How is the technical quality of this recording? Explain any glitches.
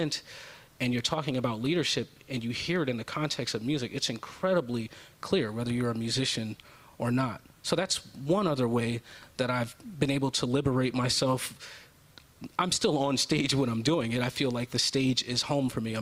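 Listening through the recording, nothing stood out as a technical problem.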